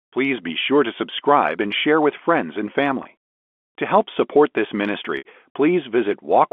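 A brief buzzy hold at 3.03 s, right after "share with friends and", and a longer one from 5.18 to 5.25 s after "help support this" that fades toward silence before a cross-fade back: packet loss with pitch repetition, the receiver looping the last pitch period over 20 and 70 ms gaps in the G.711 telephone stream.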